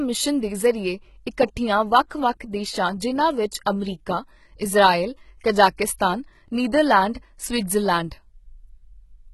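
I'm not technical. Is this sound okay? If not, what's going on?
No. The speech was most likely squeezed through a low-bandwidth HE-AAC compression setting. That kind of codec keeps only the lower part of the sound properly and fakes the upper part by copying lower material upward. Nothing at all survives above about 11.8 kHz, and the upper part below that is a rebuilt imitation. The damage is heavy: s sounds come across gritty, metallic or lisping, and the brightness sounds artificial.

There is also a brief pre-echo at about 7.14 s. The codec works in short chunks and spreads its error noise across a whole chunk. When a sudden sharp sound lands late in one, that noise also fills the silence just before it. The result is a short hiss of about 15 ms arriving ahead of the attack, which makes the attack sound softened and smeared.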